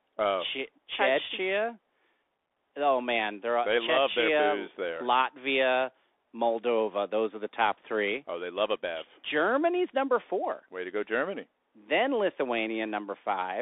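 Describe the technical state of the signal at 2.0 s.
At 2.0 s the speech is thin and boxy, with a granular hiss beneath it and scratchy s sounds, as across the whole clip. This is the Bluetooth CVSD headset codec: one-bit up-or-down steps track the waveform, and the band is held to roughly 300 Hz to 3.6 kHz.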